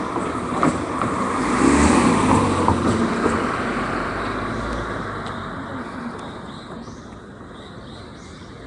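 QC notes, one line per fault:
Throughout, Nellymoser compression: a rough, hissy halo and smeared, underwater quality with nothing above 10.6 kHz, likely from Nellymoser Asao coding at around 44 kbps, which fills starved bands with noise.
0.21–8.59 s, word clock ticks: sharp ticks of uneven strength roughly every 0.15 s, around seventy in all. An unlocked receiver clock drifting by roughly 150 ppm drops or repeats one sample at each slip.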